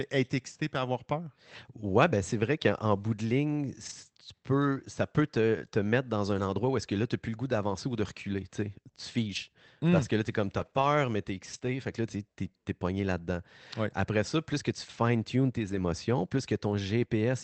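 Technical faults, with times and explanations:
3.85 to 15.81 s, lost packet rebuilt from error correction: nine brief rough, noisier patches of 40 to 80 ms, clustered around 9.3 to 11.7 s. Each gap was filled from the low-bitrate backup copy carried in the following packet, so the sound continues without a break but loses detail, consistent with runs of two to four 20 ms packets.
10.69 to 10.73 s and 11.57 to 11.61 s, short concealed packet loss: two 20 ms holes where neither the original nor a backup copy arrived. The decoder extended the preceding sound and then blended back into the real signal, producing a brief smear or wobble between rebuilt patches in the Opus call audio, which is band-limited at 8 kHz.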